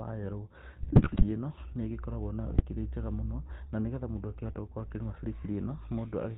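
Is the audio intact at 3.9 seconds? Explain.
No. At 3.9 seconds the speech carries GSM full-rate codec damage, present across the whole clip rather than just that moment. The codec models the vocal tract and drives it with a regular pulse train built from only every third excitation sample, which gives the plainly audible buzzy, gravelly roughness, and nothing comes through above 4 kHz. The sound fits a 13 kbps GSM stream. That grainy buzz sets it apart from a simple low-pass filter, which only dulls the sound.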